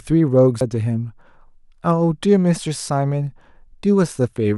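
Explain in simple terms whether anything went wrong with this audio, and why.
At 0.61 s there is a CD skip. The player went briefly silent with a tick, then the speech carried on from a different spot on the disc.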